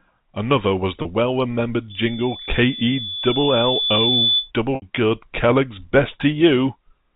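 Packet loss with pitch repetition strikes this telephone speech recording twice, at 1.02 s for 30 ms and at 4.75 s for 70 ms. When audio went missing, the receiver bridged each gap by looping the last pitch cycle it had. The brief first gap comes across as a slightly held, buzzy sound. The longer second one lets that repeated cycle fade toward silence before the speech cross-fades back in. The gap lengths suggest packets of about 10 ms. A loudspeaker feedback squeal runs from 1.9 s to 4.51 s. A loudspeaker fed back into the microphone, and at 3.5 kHz the loop gain rose above one, so a single tone swelled over roughly two seconds until it was about as loud as the speech before it stopped. The G.711 mu-law coding, at 64 kbps, lets that tone through because it sits just under the channel's 4 kHz ceiling.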